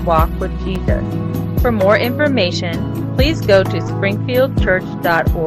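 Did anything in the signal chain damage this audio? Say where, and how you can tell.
Yes. A gap between stream segments at 0.75 s, in the streaming and playback stage: a hard-edged hole of silence about 4.8 ms long cuts the sound. Two segment timestamps leave a small gap that the player fills with silence, without dropping any audio.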